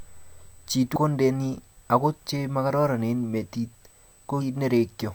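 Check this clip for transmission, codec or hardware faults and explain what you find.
Two faults are present in this speech clip. A steady USB whine at 8 kHz runs throughout, about 35 dB below the speech. It comes from 125-microsecond microframe current draw leaking through power or ground, and its 8 kHz pitch distinguishes it from mains hum or acoustic noise. Damaged data in a compressed stream appears at 0.92–0.96 s and 4.37–4.43 s. Corrupted bytes make the decoder lose sync and hunt for the next frame header, producing a brief chirp, squawk, click or short hole.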